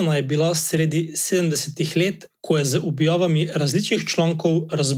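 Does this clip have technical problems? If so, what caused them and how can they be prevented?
Yes. A lost packet rebuilt from error correction, at 0.75 to 0.77 s between "je bila" and "sedemdesetih let ko je", played a low-bitrate copy from the next packet, leaving no gap but a brief rougher, noisier patch. Reducing network packet loss, for example with a steadier connection or prioritised traffic, prevents it.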